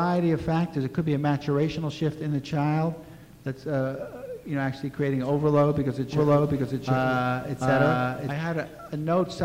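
The audio has a doubled audio track from 6.13 to 8.33 s. A second full-band copy of the sound runs about 0.7 s behind the original, at roughly the same level. It has no decay or room colour, so it is not an echo. It cuts in and out abruptly at the edges of that span. The likely cause is a second capture through a slower path, or an edit that left two copies out of step.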